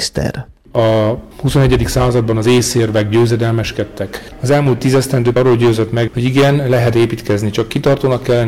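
Hard clipping runs through the whole clip. The signal was driven roughly 13 dB past what the stage could pass, so every peak is sliced flat, with around 7 percent of samples pushed past the stage's limit. The flattened tops generate harmonics high up the spectrum, heard as a harsh, fuzzy crackle on each loud moment. On a waveform the peaks appear as squared-off plateaus. A spectrogram shows vertical smears of energy reaching into the high kHz range wherever the level peaks.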